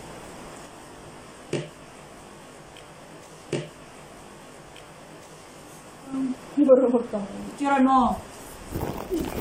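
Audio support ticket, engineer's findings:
Channel delay (comb filtering), 0.66–6.14 s: rough, slightly doubled sound. One channel lags about 20 ms before mono sum, cancelling shared content at evenly spaced frequencies from around 30 Hz upward. Spectrogram: fixed horizontal notch stripes; waveform shows smeared transients.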